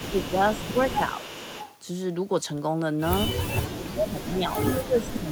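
From 0.0 to 0.32 s and again from 0.54 to 1.76 s, a quieter copy of the speech trails the original by about 0.41 s, sitting roughly 20 dB below it. This echo leak is likely the far side's loudspeaker sound reaching its microphone and slipping past an echo canceller that did not remove it fully, so it returns delayed.

Inside those stretches, the speech dips by about 5 dB for 40 ms at 0.10 to 0.14 s and at 0.74 to 0.78 s. From 3.77 s to the end of the clip, it is pulled down much harder, by up to about 25 dB, for roughly 1.5 s. This is speech suppressed in double talk. The likely cause is the echo canceller mistaking the talker for loudspeaker echo while both sides were active, and turning the talker down along with the echo.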